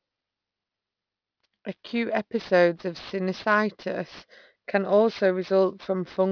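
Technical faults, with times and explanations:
Throughout, aliasing: the speech sounds as if it was resampled down to about 11 kHz with no anti-alias filter in front, so energy above the 5.5 kHz fold point was mirrored back below it instead of removed. Sibilants come out gritty and metallic, carrying tones that don't belong to the speech, sitting roughly 25 dB under it, and the spectrum stays full right up to the 5.5 kHz edge rather than rolling off.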